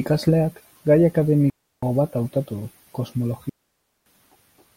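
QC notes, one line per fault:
1.50–1.83 s and 3.49–4.06 s: digital wireless dropout. The speech cuts to near silence for about 0.33 s, then about 0.57 s. The receiver lost too much data and muted with a very fast fade. No noise burst marks either edge.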